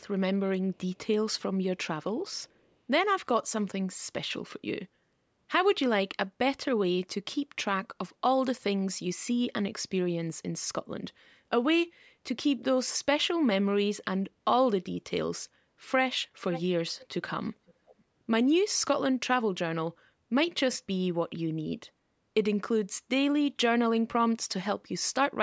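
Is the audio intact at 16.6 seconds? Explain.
No. From 16.51 to 16.73 s there is an echo leak: a quieter copy of the speech, roughly 10 dB down, returns about 500 ms late. This is likely a far-end loudspeaker signal that the echo canceller failed to fully suppress.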